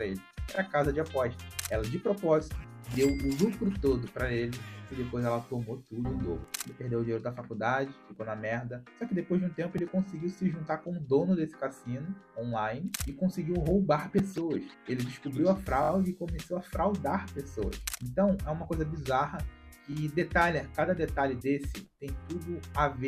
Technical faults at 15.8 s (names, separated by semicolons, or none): repeated buffer